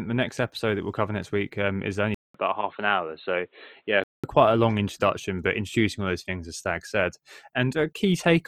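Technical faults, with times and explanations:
2.14–4.24 s, input switched to a poorer device: A 200 ms silence comes at the switch. The speech then turns dull and boxy, with nothing above 4.2 kHz, and a faint new noise floor sits far below it. Loudness barely changes. Input likely moved to a narrower-band microphone.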